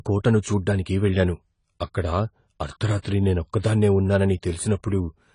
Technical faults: AAC compression; pre-echo

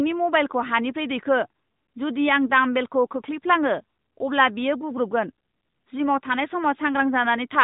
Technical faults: AMR narrowband mobile codec

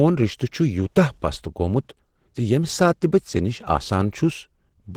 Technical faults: Opus compression

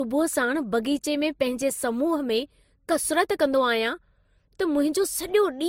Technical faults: transcoding between lossy codecs

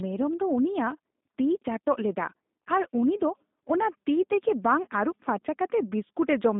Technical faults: G.729 codec

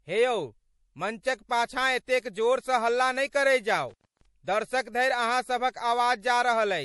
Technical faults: MP3 compression; intermittent contact

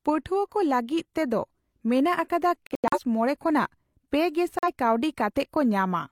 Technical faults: corrupt frame muted

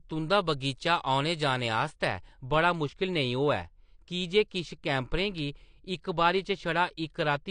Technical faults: AAC compression; de-emphasis applied wrongly; dropped samples

